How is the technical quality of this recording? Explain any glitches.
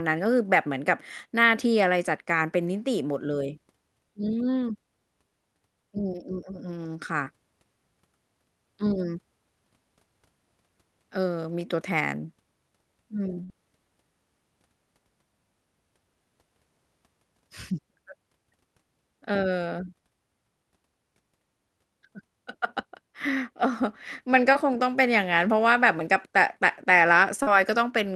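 The speech passes through a call link, with the top end stopping at about 12 kHz and coding noise that points to Opus at roughly 40 kbps. Three dropouts interrupt it.

From 13.43 to 13.51 s the last sound is held and fades for about 55 ms, then jumps ahead with roughly 60 ms of speech gone. This is a burst of packet loss. Several consecutive packets failed to arrive in time, so the receiver stretched the last sound while turning it down. When the real stream returned, the section in between had been skipped.

Two shorter blips follow, at 24.53 to 24.57 s and 27.43 to 27.49 s. Each is a brief smear or wobble rather than a clean gap, about 18 ms at the first and 38 ms at the second. These are short concealed packet losses. The decoder was missing roughly 20 ms and 40 ms of audio, filled the hole by extending the preceding sound, then crossfaded back into the arriving signal.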